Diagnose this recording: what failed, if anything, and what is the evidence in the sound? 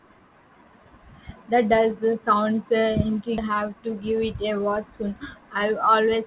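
A skip ahead at 3.38 s in this speech, a network and jitter-buffer fault. Playback jumps straight forward with no filler and no silence, and roughly a second of speech is simply gone, so the two sides meet almost directly. A stretch of packets was dropped while later audio was already queued, either in transit or discarded when the buffer overflowed, and the delay fell by about the same second.

Jitter buffer speed-up follows, from 3.5 to 4.78 s at about 107% and again from 5.34 to 6.23 s at about 109%. Speech runs hurried while its pitch stays put, with around 100 ms trimmed in each stretch. The buffer was holding more audio than its target, so the receiver cut out short pitch-period-sized slices in quick succession to pull latency down. This all sits inside a call path band-limited to 4 kHz, which fits G.711 mu-law.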